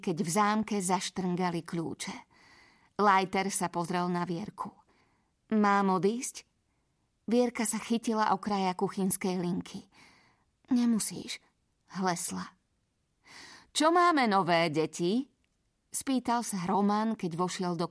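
No technical fault can be heard anywhere in the speech recording; the signal stays continuous and steady throughout.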